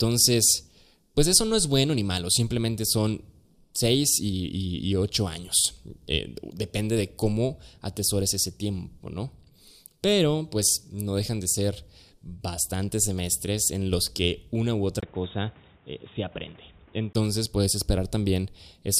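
A speech clip. Just after "los que una u", at 15.01 s, the sound goes dull and boxy, and a bit quieter. Nothing reaches above 3.8 kHz, and a new background noise sits well below the speech. A 20 ms gap marks the change. The likely cause is an input switched to a poorer device. Full tone returns at 17.15 s.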